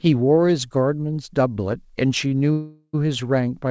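Speech, carried over a call link whose wideband codec leaves nothing above 8 kHz, shows two timing faults. First, a short stall from a late packet: a packet missed its slot and the jitter buffer ran dry at 2.28 s, so the receiver held the last sound for about 29 ms until 2.34 s, giving a brief stretched hold with a slight buzz or dip before speech resumes with nothing lost. Then a call audio freeze from 2.52 to 2.96 s, likely caused by packets held up in transit emptying the buffer. For roughly 417 ms the last sound is continued as a fading buzz or hiss, with about 40 ms of silence in it, before speech picks up exactly where it stopped. Nothing is missing, but a gap has been inserted.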